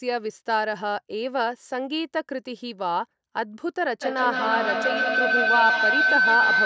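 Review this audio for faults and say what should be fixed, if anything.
Feedback howl starts at 4.02 s and runs to the end of the clip at 6.65 s. Two devices in the same room are on the call, so the loudspeaker's output re-enters a microphone and gains level on every trip around the loop. The repeats build instead of decaying and narrow to a tone near 1.5 kHz, with repeats roughly every 150 ms and peaking at about 4 dB above the speech, well within the call processing's 8 kHz bandwidth. To prevent it, keep only one device unmuted in a shared room, or use headphones.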